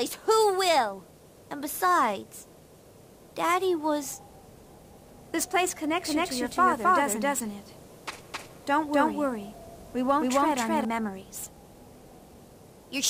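From 6.05 to 10.85 s a doubled audio track appears: a second, full-band copy trails by roughly a third of a second at about equal level, likely a second capture through a slower path. Unlike an echo or reverb, it never decays and switches on and off abruptly.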